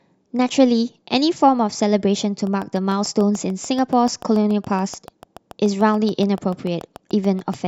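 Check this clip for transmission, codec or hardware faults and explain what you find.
One hardware-type fault is present. A train of clicks runs from 2.47 s to 7.55 s: roughly forty similar pulses at a regular 6.9 per second, peaking about as loud as the speech. The likely source is electrical interference or a faulty connection or power supply, heard as steady ticking over the speech and through its pauses.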